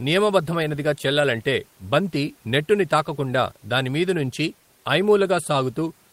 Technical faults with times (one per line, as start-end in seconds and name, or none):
none